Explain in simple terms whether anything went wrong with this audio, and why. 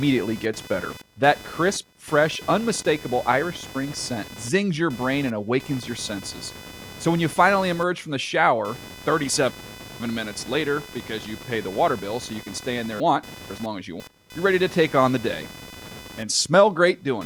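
Computer activity noise: the computer's changing workload disturbed the audio circuit's shared ground, adding a buzz that jumps up and drops back with the computer's activity, roughly 500 pulses a second, under the speech throughout.

Chunks out of order: twice, a half-second piece of audio was delivered one piece late, so two pieces swapped places. This garbles the speech from 9.0 to 10.0 s, after "emerge from the shower", and from 13.0 to 14.0 s, after "can stay in there".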